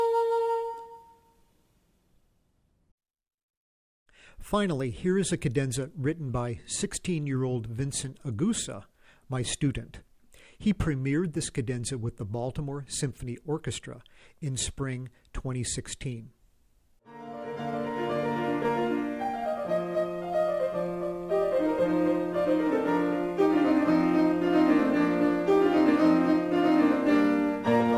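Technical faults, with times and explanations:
No technical faults can be heard anywhere in the recording.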